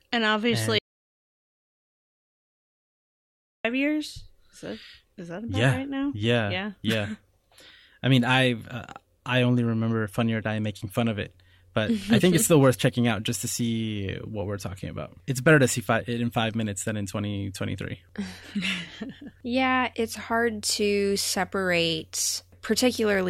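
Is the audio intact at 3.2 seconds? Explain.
No. An audio dropout to silence runs from 0.79 to 3.65 s, likely because the input path was lost while the recorder kept writing silence. The speech cuts off abruptly, leaving about 2.86 s of dead silence with no room tone, then resumes mid-flow.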